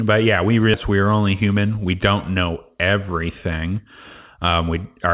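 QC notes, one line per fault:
0.74–0.76 s, skip ahead: playback jumps forward with no gap filled in, so the speech on either side is joined almost directly and roughly 0.4 s of it never plays. The listener hears a sudden splice rather than a pause. The missing stretch was dropped, either in transit or by the jitter buffer discarding it on overflow, while later audio was already queued, so the delay shortens by about that same amount in one step.
1.42–1.78 s, jitter buffer speed-up: the speech runs at about 113% speed but keeps its pitch, so this passage sounds hurried. The buffer held more audio than its target, as happens when delayed packets arrive in a burst. To shrink the delay, the receiver cut out short pieces of one or a few pitch periods many times in a row, removing about 50 ms in total. Because whole periods are removed, timing tightens without any pitch change. The call path's band limit is audible throughout, with nothing above 4 kHz, which fits G.711 mu-law.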